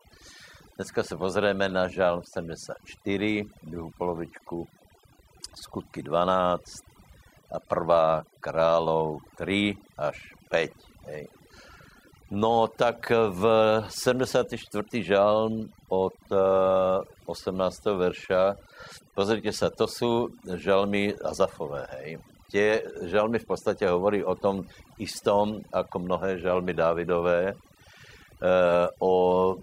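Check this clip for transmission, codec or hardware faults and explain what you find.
Overdone noise removal, rather than a transmission, codec or hardware fault, runs through the whole speech clip. Noise reduction set too strong mutes bands near its noise estimate, leaving near-silent, twinkling gaps and taking quiet parts of the voice with them; unlike codec smearing, the artefacts cluster in quiet passages.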